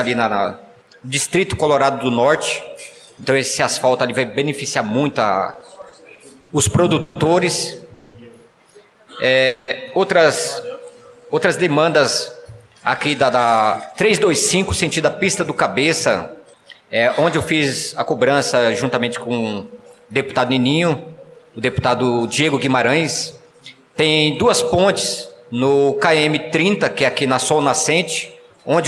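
From 5.53 to 7.17 s the sound drags and hiccups in repeated stalls (stutter): nine brief holds, the longest 140 ms, together adding 360 ms, about a fifth of that stretch. Packets kept arriving late, so the jitter buffer repeatedly ran dry and the receiver extended the last sound each time.

At 7.93 to 8.16 s and again at 9.47 to 9.70 s the sound hangs for 210 ms as a fading, buzzy continuation of itself, never dropping to silence, then resumes with nothing lost. Each is a call audio freeze, likely from packets held up in transit, which emptied the buffer and added 210 ms of delay.

Between 10.72 and 11.26 s the sound stretches and drawls while keeping its pitch, running at 87% speed. This is a jitter buffer slow-down. The receiver repeated pitch periods to rebuild its reserve and added 80 ms.

From 12.98 to 23.61 s the sound is slightly hurried, about 5% fast, with no rise in pitch. This jitter buffer speed-up came from the receiver trimming small pitch-period pieces to shed excess buffered delay, removing roughly half a second in all.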